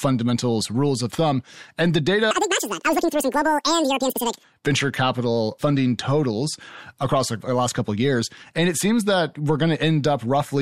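Audio read two samples at a time (double speed) from 2.31 to 4.43 s, just before "venture capital funding totals": pairs of samples were taken as single frames, so the speech runs at 2.0x speed, an octave higher.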